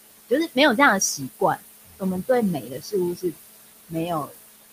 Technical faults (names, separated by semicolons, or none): noise suppressor artifacts; speech cut by the noise suppressor